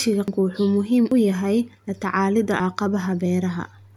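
Three abrupt forward jumps in the speech occur at 0.28 s, 1.12 s and 2.60 s. The first skips roughly a third of a second; the later two each lose about a tenth of a second. No gap of silence accompanies them. This is likely a dropped buffer (overrun): the samples were overwritten before being read, so the audio on either side was spliced straight together.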